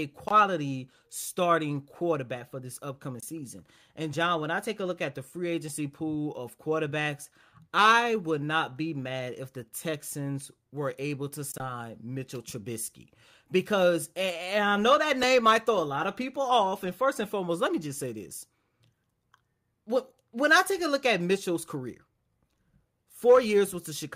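At 4.13 s and again at 15.23 s, between "and I know that" and "might throw a lot", the speech skips forward. Each is likely a dropped buffer (overrun): a few milliseconds of samples were overwritten before being read, and the surrounding audio was spliced together with no gap. The waveform shows a sudden discontinuity rather than silence, and the spectrogram a thin vertical broadband streak at each point.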